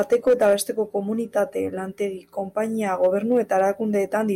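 From the first moment to about 0.54 s the speech runs into hard clipping, with the level pushed roughly 4 dB beyond what the signal path can carry. The peaks are sheared flat, and those squared-off tops throw harmonics high into the spectrum, so loud syllables pick up a rough, crackling edge. It returns from 3.04 to 3.65 s at a milder overdrive of about 2 dB, where the distortion sits more as brief crackle on the peaks.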